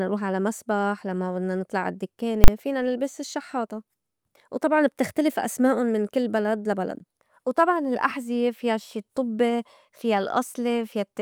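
A single loud bang at 2.44 s, just before "فينا نلبس الشحّاطة": invalid numbers at full scale, where a broken calculation pinned a 40 ms block to maximum level.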